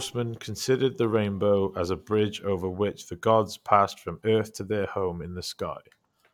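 No technical faults can be heard anywhere in this speech recording.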